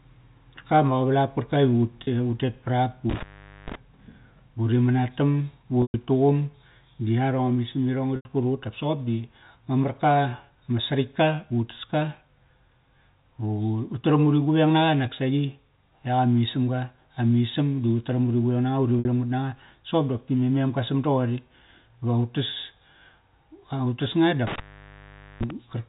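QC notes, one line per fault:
2.04–2.07, 5.82–5.94, 8.16–8.25, 18.99–19.05 s: packet loss with pitch repetition. Gaps of 30, 120, 90 and 60 ms are filled by repeating the last pitch period. The 30 ms gap sounds like a briefly held buzz. The longer ones fade to silence before the sound cross-fades back.
3.10–3.75 s and 24.47–25.50 s: intermittent contact. A loose connection opens for about 450 ms and then about 810 ms, dropping the sound to faint hiss, with crackle at each break and reconnection.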